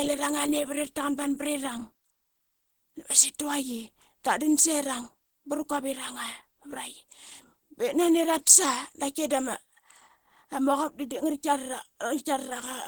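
A low-rate Opus encode, likely around 16 kbps, runs through the whole recording, and at that budget the encoder appears to be working in its hybrid speech mode, with content reaching up to about 20.1 kHz. The Opus compression damage is plainly audible from start to finish: the speech takes on a muffled, hoarse quality, with a rough, grainy texture where finer detail should be, rather than the swirling holes of older codecs.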